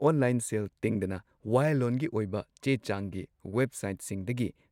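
No technical faults can be heard in this speech recording. Nothing in the sound points to a problem anywhere along the recording or playback chain.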